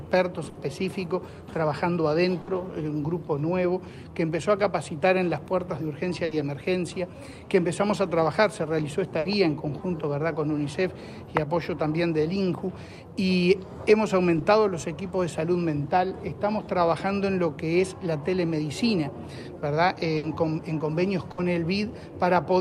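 Burst of packet loss at 0.49, 2.41, 6.25, 9.19, 20.17 and 21.31 s: each time the last sound gets stretched and faded for 60 ms, then 60 ms is simply gone.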